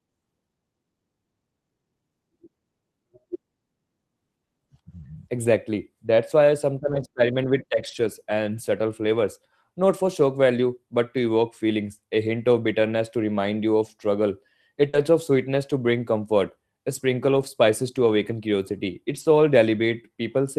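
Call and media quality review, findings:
Lost packet rebuilt from error correction at 4.99–5.05, 6.87–7.01, 7.75–8.05, 10.05–10.07, 14.93–14.95, 17.33–17.43 and 19.15–19.21 s. Rough, noisier sound with no gaps: Opus in-band FEC supplying low-bitrate copies. Spectrogram shows grainier, noisier texture across those spans. The longest is 160 ms at 7.75 s.

Short concealed packet loss at 14.89–14.95 s. A 40 ms brief smear/wobble as the jitter buffer and decoder PLC extend the preceding sound, then crossfade back. The waveform shows the extended sound, running directly into the FEC-rebuilt frame at 14.93 s.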